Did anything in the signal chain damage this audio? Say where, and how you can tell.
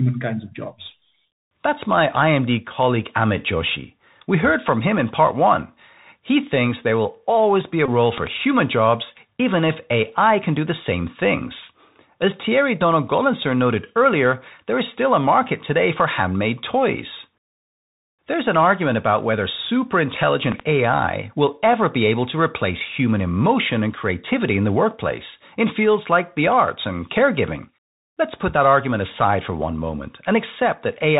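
Yes. At the codec stage, Bluetooth CVSD headset coding runs throughout: nothing above 4 kHz, scratchy s sounds and granular hiss, from a one-bit adaptive-step coder at 64 kbps.

Over the Bluetooth link, a headset packet is repeated at 7.86 to 7.89 s, after "will always be a". About 22.5 ms of lost packets is refilled by re-decoding the last one every 3.75 ms, producing a buzz near 267 Hz.

A loud pop occurs twice, as double pops about 15 dB above the signal: 8.18 to 8.29 s after "always be a role", and 20.52 to 20.62 s after "argument about whether super". The likely cause is a voltage step or pulse added in the analogue path.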